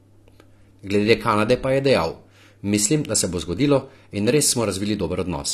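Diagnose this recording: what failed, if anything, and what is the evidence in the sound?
The codec stage is the likely failure: AAC compression, with damage that fits AAC-LC at around 32 kbps. Throughout the speech nothing remains above 13.3 kHz, and coarse spectral quantisation leaves a plainly dull, smeared sound with fizzy sibilants.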